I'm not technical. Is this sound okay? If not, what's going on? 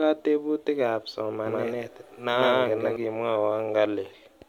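No. From 1.46 to 2.96 seconds, the speech has a doubled audio track. The same speech plays twice, with the second copy arriving about 150 milliseconds later and just as loud. It sounds like a quick, flat stutter behind every syllable, not like an echo in a room. The copy starts and stops suddenly at those times. The likely cause is a second, slower recording path being mixed in by mistake.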